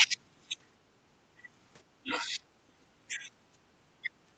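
Speech suppressed in double talk dips the speech at 0.90–0.97, 2.01–2.59, 3.07–3.35, 3.51–3.58 and 4.01–4.09 s, likely an echo canceller ducking during overlap. The deepest drop is about 25 dB. These are partial, shaped dips rather than the abrupt silent gaps of packet loss.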